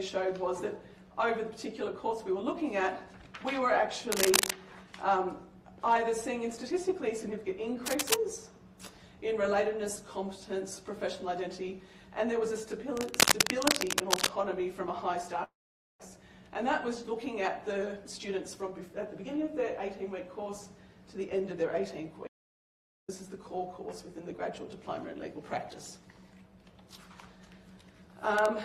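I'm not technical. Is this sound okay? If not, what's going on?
No, there are a few distinct problems.

Cable scratch noise appears three times: from 4.12 to 4.51 s, from 7.86 to 8.14 s, and from 12.97 to 14.29 s. You hear a rough scratching or rustling laid over the sound, about as loud as the sound itself or a bit louder. It is likely caused by a worn cable, plug or knob being moved, which makes the electrical contact flicker. Unlike the gaps later on, nothing is missing here. Extra noise is simply added on top.

A long network dropout runs from 15.43 to 16.10 s. Audio stopped arriving, likely because of a connection problem. The player stretched the last bit of sound into a buzz that fades away, then left roughly half a second of silence. When the audio returns, about 0.4 s of it is gone. The fading buzz before the quiet is what marks this as a network problem rather than an unplugged device.

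A jitter buffer speed-up happens from 17.97 to 18.89 s. The receiver had built up too much waiting audio, so it trimmed tiny slivers out of the sound, about a tenth of a second in total. The sound plays roughly 10% faster and feels hurried, but the pitch doesn't rise, so it doesn't sound like a fast-forwarded tape.

An audio dropout to silence occurs from 22.27 to 23.08 s. For about 0.81 s the sound cuts off into dead silence, with no background hum at all, and anything during that time is lost. It is likely caused by a device or link briefly disconnecting while recording carried on. Unlike the network dropout, there is no fading buzz first. The sound just stops and restarts abruptly.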